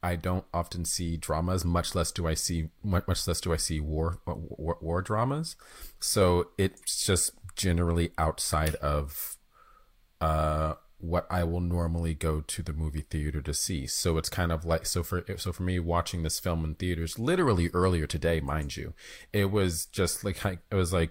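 Nothing technical goes wrong anywhere in this speech recording, so there's no fault to point to at any moment.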